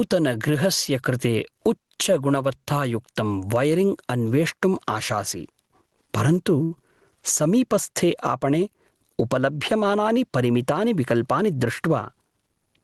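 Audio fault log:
Throughout, gain pumping: the sound is squashed, with loud and soft parts pulled closer together by a gain swing of around 15 dB, likely from gain set far too high with a fast limiter clamping down.
6.63 to 6.73 s, short stall from a late packet: the jitter buffer ran dry, so the last bit of sound is held for about 73 ms, nothing lost.
11.14 to 12.37 s, jitter buffer speed-up: backed-up audio got trimmed by dropping tiny pitch-period slices, roughly a tenth of a second in all, so speech runs about 7% faster at unchanged pitch and feels a bit rushed.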